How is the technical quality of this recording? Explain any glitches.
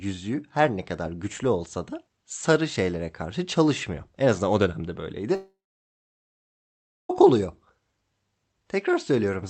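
The recording has one serious glitch, a long network dropout; around it, the call-codec audio sounds band-limited at about 8 kHz. From 5.35 to 7.11 s the sound fades briefly into a buzz or hiss and then goes silent for about 1.5 s, likely from lost packets. It resumes with about 1.74 s missing, which sets it apart from a short concealed loss or a deliberate pause.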